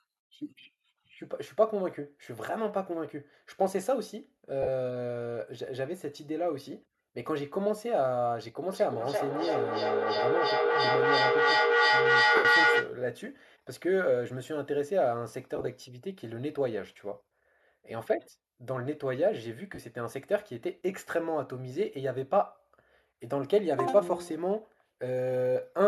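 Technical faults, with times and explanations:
4.62–4.67 s, 12.36–12.45 s, 15.56–15.67 s, 19.75–19.79 s: lost LE Audio frames. The LC3 decoder concealed the gaps of 45 ms, 90 ms, about 52 ms in short runs, and about 38 ms (consistent with 7.5 ms frames) by repeating the last spectrum with random signs, producing brief noisy smears.
8.73–12.99 s: feedback echo between two devices. A second device replays this microphone's signal, so the sound returns roughly every 300 ms, thinner and ringing. It reaches about 5 dB above direct speech, so the repeats pile up.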